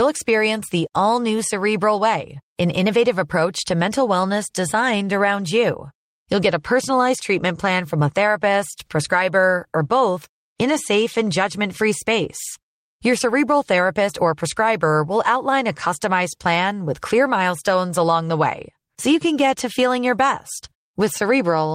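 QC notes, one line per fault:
Nothing stood out on listening to the speech.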